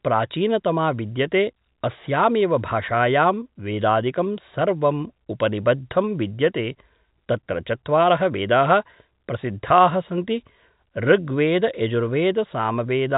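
No faults to report: the speech sits inside a G.711 telephone channel, with nothing above about 3.8 kHz and only the faint level-tracking quantisation noise that coding leaves, which is how that path is meant to sound.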